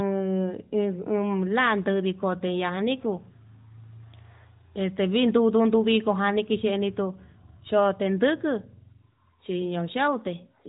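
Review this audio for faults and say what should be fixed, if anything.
Nothing to fix: the speech runs through the AMR narrowband mobile codec as designed, with no content above 3.8 kHz and the light coding texture that points to its 12.2 kbps mode.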